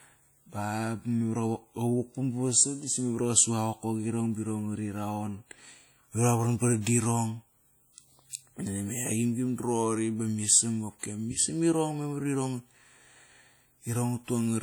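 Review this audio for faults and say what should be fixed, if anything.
Codec damage is plainly audible across the whole speech recording. It sounds ringing and smeared, with a hiss that rises and falls with the speech. The likely cause is WMA compression at a low bitrate. This transform codec codes sound in long blocks, so its quantisation noise spreads over tens of milliseconds around each sound. Weak spectral detail is dropped. Content still reaches about 20.1 kHz, so the damage is in the texture, not the bandwidth. To prevent it, keep an uncompressed master or encode at a much higher bitrate with a modern codec.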